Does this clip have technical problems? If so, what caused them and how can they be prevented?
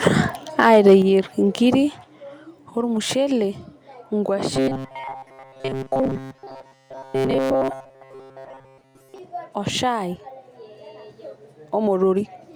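Yes. From 0.6 to 0.95 s there is microphone overload. The peaks exceed the converter's limit by about 3 dB, and a few percent of samples are flattened. This adds a harsh crackle to the loudest syllables. The likely cause is input gain set too high. Lowering the microphone's input level prevents it.

Microphone volume is stepped down twice, at 1.02 s by about 6 dB and at 2.04 s by about 4 dB. Voice and background drop together in one step. This likely comes from automatic gain control reacting to the clipping. Starting with a sensible input level avoids it.

From 4.54 to 9.18 s the speech has a robotic sound from repeated short buffers. A rigid, metallic buzz at 133 Hz runs through it, and most of the real audio is skipped. That rate fits a buffer of about 7.5 ms being replayed. The likely cause is audio arriving too seldom. Larger buffers or a less loaded system prevent it.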